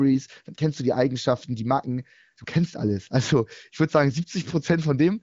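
The speech carries no audible technical faults: it has the band-limited character of AMR wideband (HD Voice) coding at a rate consistent with around 18 kbit/s, with nothing above roughly 7.5 kHz and at most faint coding traces.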